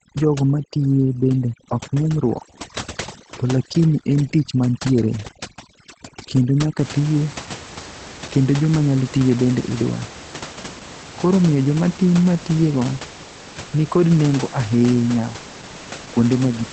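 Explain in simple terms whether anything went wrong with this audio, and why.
Yes, two things went wrong. From the start until about 6.79 s there is overdone noise removal: a cleanup tool set too strong shuts off parts of the sound whenever they resemble the background hiss. The gaps fall to near silence with twinkling specks. Unlike compression damage, it stops at 6.79 s, after which the ordinary room noise returns beneath the voice.

Throughout the whole clip there is Opus voice compression, squeezed hard to save data. It codes the voice roughly and drops everything above about 8.5 kHz, so the speech sounds muffled, slightly hoarse and a little robotic. This dullness and roughness stays the same from beginning to end.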